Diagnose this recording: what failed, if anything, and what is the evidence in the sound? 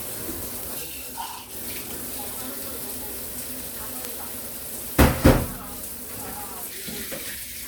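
Two bit error spikes occur, at 0.63 s and 4.05 s, each a single isolated tick with broadband content and no relation to the surrounding sound. Each affects one sample, jumping to about -9 dBFS and about -3 dBFS respectively before returning immediately. The failure is in the digital path, in storage, memory or a digital link, where one flipped bit displaces a sample value by a power of two and produces the one-sample click.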